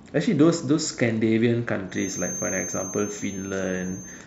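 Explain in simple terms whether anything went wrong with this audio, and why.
From about 1.86 s to the end of this speech clip, a thin whistle near 6.3 kHz, slowly swelling and fading, sits well below the voice. It's a feedback whistle, likely from the loudspeaker's sound leaking into the microphone and ringing at the edge of feedback.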